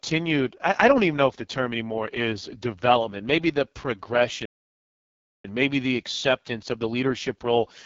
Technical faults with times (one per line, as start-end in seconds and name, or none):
0.00-7.86 AMR wideband (HD Voice) codec
4.45-5.45 playback stall